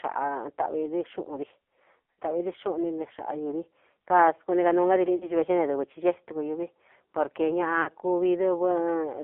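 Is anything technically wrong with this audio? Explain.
Yes. The speech runs through an AMR narrowband mobile codec throughout. The band is 300 Hz to 3.5 kHz. Heavy damage makes the voice buzzy and synthetic, which fits a very low bitrate.

There are lost AMR speech frames at 2.12 to 2.19 s, 5.16 to 5.31 s and 7.82 to 7.89 s. The decoder repeats the last good settings at falling gain, giving brief warbling dips.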